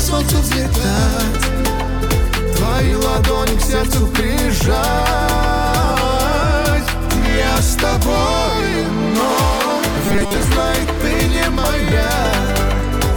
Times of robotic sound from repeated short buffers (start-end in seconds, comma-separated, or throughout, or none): 10.06-10.37